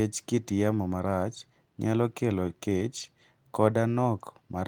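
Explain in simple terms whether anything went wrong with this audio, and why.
Around 2.97 to 3.03 s the speech turns briefly rough and noisy: that's a lost packet rebuilt from error correction. The next packet carried a low-quality backup copy, so about 40 ms was patched in rather than dropping out, which fits a couple of lost packets.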